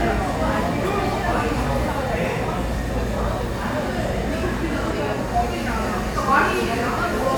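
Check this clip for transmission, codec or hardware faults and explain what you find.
Nothing turned up here; I couldn't hear any transmission, codec or hardware trouble anywhere in the audio.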